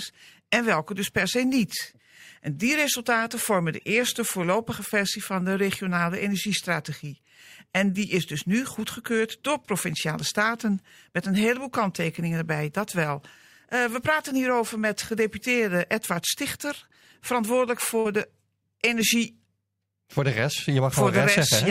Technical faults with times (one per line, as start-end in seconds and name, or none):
17.99-18.07 burst of packet loss